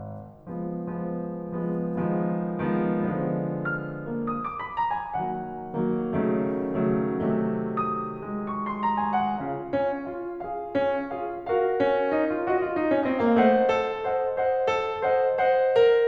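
Channel delay (comb filtering) runs from 8.43 to 10.08 s in this music. One channel arrives late by a tiny amount, on the order of 0.04 ms, which points to a couple of samples, and when the two channels are summed to mono the shared content cancels at evenly spaced frequencies. With the first notch near 10 kHz, the effect here is a dulled, slightly veiled top end rather than an obvious hollow phasiness.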